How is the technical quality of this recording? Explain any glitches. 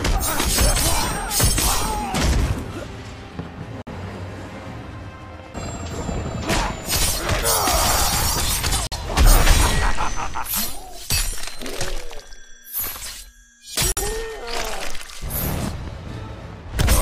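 The recording has a repeating dropout: a gap between chunks. Three silent holes occur, at 3.82 s, 8.87 s and 13.92 s. Each lasts 50 ms, and they recur every 5 s. The pattern suggests the audio was handled in 5 s blocks, with silence inserted at each join. No sound is lost. The flow simply stops and restarts. It is heard as a brief hole at a steady interval.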